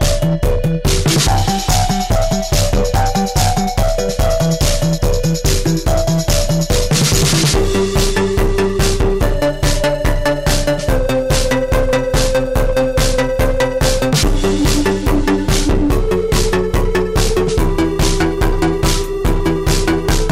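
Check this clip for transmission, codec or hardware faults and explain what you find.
Hard clipping runs through the whole clip. The signal is driven about 21 dB past what the stage can pass, so close to a third of the samples hit the ceiling and are cut flat. Those squared-off tops add strong high harmonics, giving a harsh fuzz on every loud passage. On a waveform the peaks sit as flat plateaus, and a spectrogram shows energy smeared far up the spectrum.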